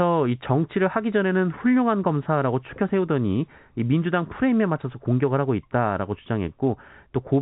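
Nothing here goes wrong at any point, and the speech simply carries the usual telephone-band character of G.711 coding, with nothing coming through above about 3.9 kHz.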